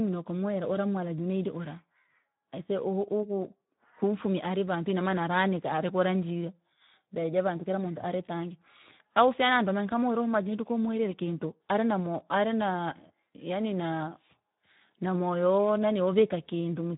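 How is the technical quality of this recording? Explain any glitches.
The recording is noticeably degraded by Speex codec coding, present from start to finish. Speex is a CELP speech codec that models the voice with a vocal-tract filter driven by a coded excitation signal. Here the bit budget is tight, which fits a setting around 11 kbps, so the excitation is coarsely represented. The speech sounds hoarse and noisy, and the band stops near 3.8 kHz, giving a narrow, telephone-like tone.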